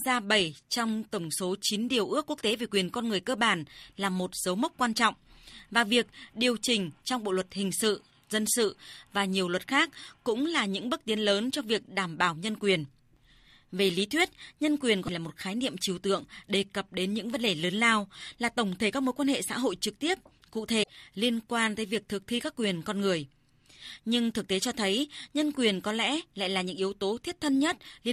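Speech clip with two brief garbled skips where the audio jumps ahead: 15.06–15.09 s, between "lý thuyết nhân quyền" and "là một khái niệm", and 20.82–20.89 s, between "hội trực tiếp cụ" and "liên quan tới việc". Both are likely a broken MP3 bit reservoir: dropped frames, roughly one and three of 24 ms, leave the following frame decoding from the wrong bytes.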